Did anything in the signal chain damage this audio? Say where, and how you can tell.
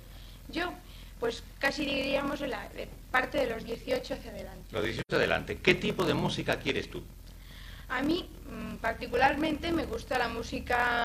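Yes, in two places. Throughout the clip there is a steady buzz at about 41.7 Hz. The sound also runs slow, at 0.889 of normal speed, but without the drop in pitch you would expect. That points to a block size mismatch (padded) in the driver or buffer stage. Blocks of 1024 samples are being written into larger reads, which fits a read size of about 1152 samples. The leftover part of each block is filled with zeros. Those short silent gaps repeat at the block rate and produce the buzz, and they stretch the timeline without resampling it.

At 5.00 s a hole about 85 ms long opens, ending at 5.12 s. The sound fades out and back in with soft edges rather than cutting off. This is AAC frame loss with muting at the codec stage, and the length fits two lost frames. The decoder zeroed the spectrum for the missing frames. The overlapping transform windows on either side then blend into that silence, which gives the gradual fade instead of a hard edge.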